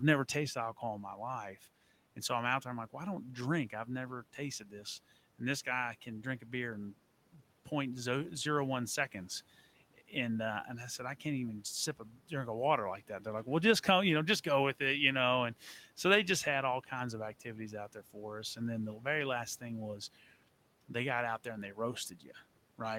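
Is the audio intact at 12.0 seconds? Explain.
No, speech cut by the noise suppressor hits 11.97 to 12.31 s. The suppressor mistook some speech for background noise and pulled it down with the room noise, by about 10 dB at worst. Roughly a tenth of a second sounds swallowed and faint.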